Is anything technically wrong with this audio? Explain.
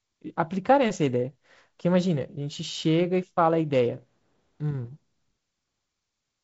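No, nothing is wrong here: the speech shows the expected behaviour of G.722 wideband telephone coding, with a faint upper-band hiss and no content above about 7.7 kHz.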